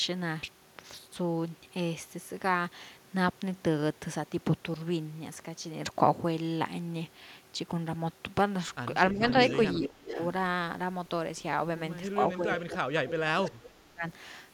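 At 9.12 s the speech dips by about 5 dB for roughly a tenth of a second. This is speech suppressed in double talk, most likely because the echo canceller heard both sides at once and turned everything down. From 9.12 to 9.79 s an echo leak also runs, a copy of the speech about 0.41 s late and about 10 dB below it, most likely echo the loudspeaker side's canceller failed to remove. Its fixed lag sets it apart from room reverberation, which trails on smoothly from the direct sound instead of repeating it.

From 9.76 to 10.17 s the suppression deepens to about 20 dB over some 0.4 s. A fainter leak, about 20 dB down with the same 0.41 s delay, follows from 10.08 to 10.26 s.

The longest suppression runs from 12.17 to 14.05 s, with dips of about 20 dB adding up to roughly 1.5 s. A brief echo scrap, about 10 dB below the speech, surfaces at 13.44 to 13.50 s, again 0.41 s behind.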